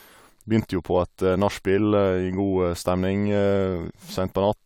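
Nothing here needs flagging: the speech comes through without any glitch, dropout or other technical hiccup worth pointing out.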